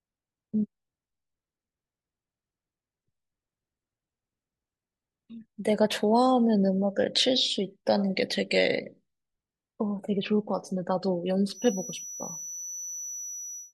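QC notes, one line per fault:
11.49–13.73 s, feedback whistle: a thin, steady 5.9 kHz tone, roughly 15 dB below the speech, swelling and fading slowly; likely a speaker-to-microphone loop sitting just at the feedback point.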